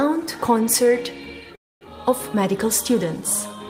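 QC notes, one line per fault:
1.55–1.83 s, call audio freeze: a short fading buzz, then silence, likely delayed packets emptying the jitter buffer. Audio resumes intact, 256 ms late.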